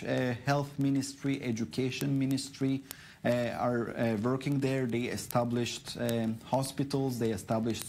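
From 0.10 s to the end, word clock ticks run steadily, about every 0.04 s. The receiving device isn't locked to the sender's clock. Each time the clocks slip, one sample is dropped or repeated. The rate points to roughly 500 ppm of clock mismatch.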